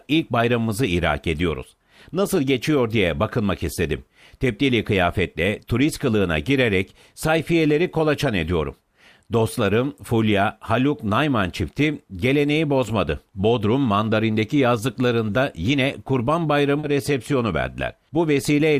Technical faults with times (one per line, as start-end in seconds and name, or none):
16.79-16.85 short concealed packet loss